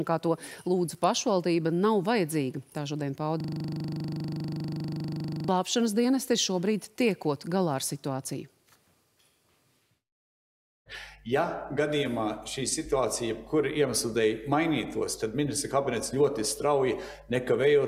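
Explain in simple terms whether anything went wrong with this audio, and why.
A system hang loop occurred from 3.41 to 5.49 s. The computer or its audio driver froze briefly, and the sound hardware kept replaying the last 40 ms chunk of audio it held. That tiny chunk repeated about fifty times in a row, 25 times per second, so for about two seconds you hear a rapid, rattling buzz at that rate instead of the sound moving forward, until the system recovers.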